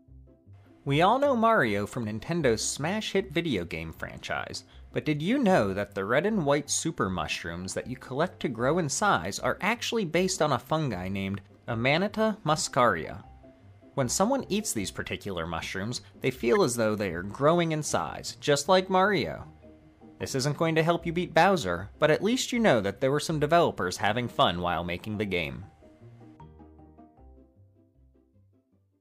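At 16.55 to 16.57 s, a corrupt frame was decoded: flipped bits in a single compressed frame went to the decoder, which played it anyway, misreading gains or codes. Energy lands at wrong frequencies for those 20 ms, heard as a brief chirp, squeak, blip or burst of noise peaking around -20 dBFS.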